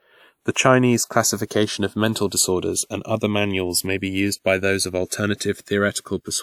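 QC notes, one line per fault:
Throughout, channels drifting apart: two channels summed to mono on clocks that disagree by roughly 100 parts per million, so the delay between them creeps up to under a millisecond. The comb notches sweep slowly, giving a moving flange rather than the fixed hollow tone of a constant offset.
1.47 to 1.51 s and 5.09 to 5.12 s, pre-echo: a hiss of 38 ms and then 30 ms, the second just after "used by those of", comes before each sharp attack. The codec spread its block's quantisation noise into the quiet moment ahead of the attack and smeared the onset. Unlike reverb, the smear comes before the sound rather than after it.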